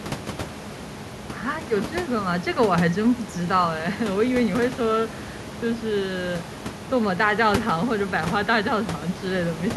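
No technical faults occur in this speech recording; the only background sound is room noise, sitting about 13 dB below the speech.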